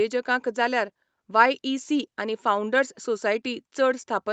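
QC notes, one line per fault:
No faults found; the speech carries the expected band limit of a call microphone and codec path, with nothing above 8 kHz.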